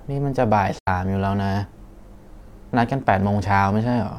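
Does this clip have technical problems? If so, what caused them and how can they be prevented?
Yes. From 0.79 to 0.88 s the speech falls into a soft-edged gap of about 85 ms, which fits two lost AAC frames. This is AAC frame loss with muting. The decoder zeroed the missing spectrum, and the overlapping windows taper the sound out and back in. A spectrogram shows a blank vertical band with blurred edges, and the waveform shrinks to silence and then regrows. Protecting the stream with retransmission or forward error correction, or having the decoder conceal lost frames instead of muting them, would prevent it.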